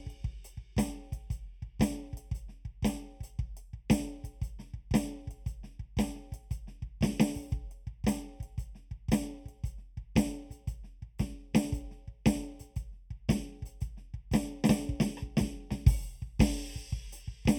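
Channel delay (comb filtering) runs through the whole of this music clip. One channel arrives roughly 0.4 ms behind the other, and when the two are folded to mono, material shared by both cancels at regularly spaced frequencies. The first notch sits near 1.5 kHz, with further notches at odd multiples above it. The result is a hollow, phasey tone, with the upper mids and presence region thinned out at fixed points.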